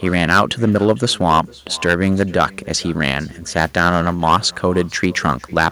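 From start to finish the speech shows hard clipping. Its loudest moments drive about 11 dB past what a stage in the chain can pass, so the peaks are sheared flat. Only a small share of samples, around two percent, hit the ceiling, but each one throws harmonics high into the spectrum. The result is a gritty crackle riding on emphatic syllables. On a waveform those peaks appear as squared-off plateaus. A spectrogram shows brief vertical smears of energy climbing into the upper kHz range at each overload.

Also present throughout is echo with no canceller. The far end's loudspeaker output is being picked up by its microphone, and nothing subtracts it, so the speech returns roughly half a second later at about 23 dB below the original. Every phrase is trailed by a faint, thin ghost of itself. A spectrogram shows a weaker, blurred duplicate of each speech pattern displaced to the right by around half a second. 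On the waveform, low-level copies of each burst fill the gaps that should be silent.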